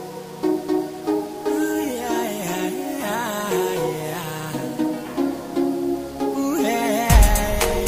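From start to finish the sound carries a coarse, grainy distortion. It is loudest in relative terms on quiet passages, which turn gritty. The softest moments sputter or drop out entirely. The grit rises and falls with the signal. That points to low bit depth without dither. The likely cause is rounding to only about 7 bits, with no added noise to break up the steps. The error sits roughly 25 dB below the signal.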